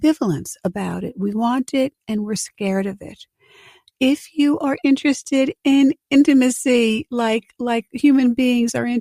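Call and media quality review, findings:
Nothing stood out on listening, and there are no findings to log for this clip.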